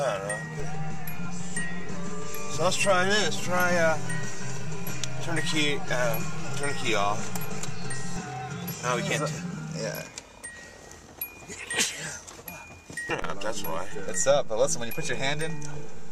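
At 0.6 s the zero line jumps, a DC step of about -26 dBFS, heard as a low thump; it holds until 8.16 s, where it thumps back. At 13.22 s a second step of about -27 dBFS hits and stays put to the end, with the sound riding through unchanged.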